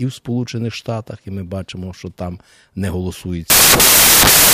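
At 3.5 s the speech turns into loud, harsh broadband noise that lasts to the end, at 4.54 s. The fault is samples built from the wrong bytes. The reader assembles each sample with its bytes misplaced: shifted by one byte, in swapped order, or read with the wrong alignment. The busy low bits end up as the most significant part. The result is a harsh hiss.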